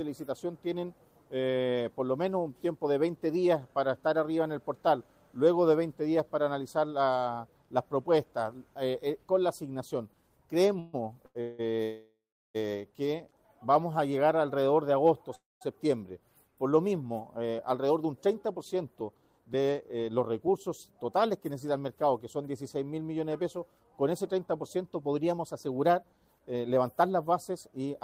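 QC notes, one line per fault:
10.79–11.61 s, repeated stalls (stutter): three short dropouts, the longest about 177 ms, where the last bit of sound gets stretched to cover the wait. Half of that stretch is filled-in sound, so it drags and stutters, but nothing's actually lost; packets just kept turning up late.
11.83–12.56 s and 15.35–15.63 s, call audio freeze: the sound holds as a fading buzz then drops to silence, about 350 ms and 190 ms of it, before carrying on where it left off. That's likely the jitter buffer running dry while packets were held up, adding gaps of 719 ms and 259 ms.
17.37–21.17 s and 24.47–27.91 s, jitter buffer speed-up: the audio runs about 7% and 8% fast at unchanged pitch, sounding a bit hurried. The receiver is snipping out tiny pitch-period chunks, roughly 300 ms in each stretch, to shed the extra delay built up in the buffer.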